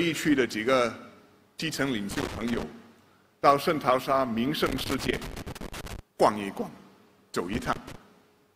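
Loose connector crackle breaks into the audio three times: from 2.11 to 2.63 s, from 4.66 to 5.99 s, and from 7.53 to 7.95 s. Each burst is an irregular scratching as a worn or dirty contact keeps making and breaking, chopping the signal on and off. On the waveform these stretches show ragged dropouts and sharp spikes, and a spectrogram shows them as scattered vertical broadband streaks across the whole frequency range.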